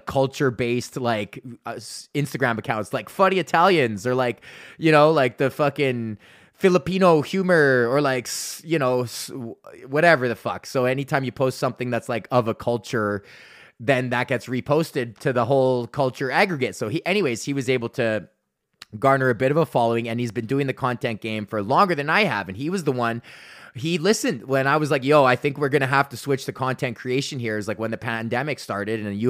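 Speech recording with no technical faults to report.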